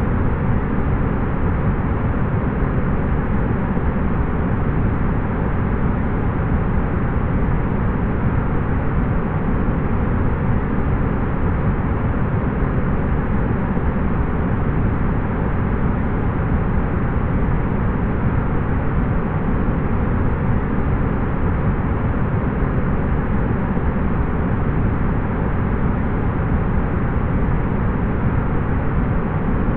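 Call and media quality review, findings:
Nothing to flag on this one; no faults turned up anywhere in the clip.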